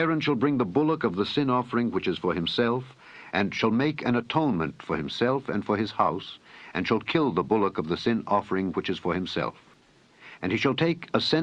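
No technical faults can be heard anywhere in the clip. There is nothing here that needs a timestamp or a repair.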